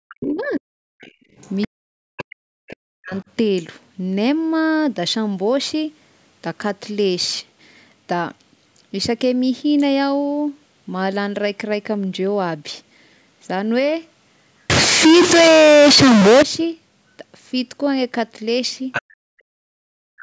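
From 0.04 to 0.81 s the speech dips hard, by roughly 40 dB at its deepest. This is speech suppressed in double talk. Both ends were likely talking at once. The echo canceller could not tell the local talker from the loudspeaker echo, so it pulled everything down.

Inside that span, from 0.09 to 0.43 s, a second, fainter voice comes through. This is the other side's voice leaking through, about 15 dB below the speech. The far end was likely played on a loudspeaker, and the canceller left part of it in the microphone signal.

It leaks again from 1.01 to 2.24 s, about 20 dB down. During this leak, from 1.11 to 1.34 s, the room sound drops by about 32 dB. This is background gated by the echo canceller. The canceller clamped the microphone while the loudspeaker played. The background vanishes for about a fifth of a second, then returns.

From 1.66 to 3.13 s the speech is suppressed in double talk again, roughly 40 dB at worst, across about one and a half seconds. 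A faint scrap of leaked far-end voice follows from 3.16 to 3.24 s, about 30 dB down.

From 14.70 to 16.43 s the audio is distorted. This is a stuck bit. One bit in the samples is likely fixed at 0 or 1, so about half the values are off by a fixed step. Quiet moments fill with noise rather than silence.

At 18.92 to 19.02 s a short burst of the other side's voice leaks through. It is only about 5 dB below the speech. From 19.17 s to the end, speech is suppressed in double talk once more. It drops by roughly 40 dB at worst, over about a second.

Throughout, the call microphone processing leaves nothing above 8 kHz. That limit is normal, not a fault.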